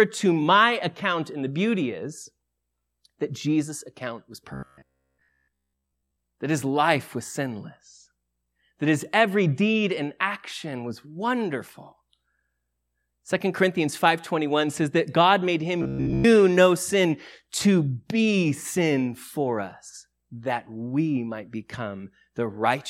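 From 4.54 to 6.17 s, then 15.83 to 16.24 s, the speech becomes robotic sound from repeated short buffers: a rigid metallic buzz at 66.7 Hz, likely from 15 ms chunks looping while new audio arrives too seldom. The first stretch is entirely replaced and the second mostly. Unlike plain dropouts, the sound never goes silent.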